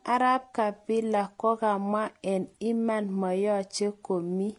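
Throughout the speech, content stops at 10.8 kHz, a hard ceiling on a spectrogram. Layered artefacts suggest likely transcoding between lossy codecs, Vorbis then HE-AAC.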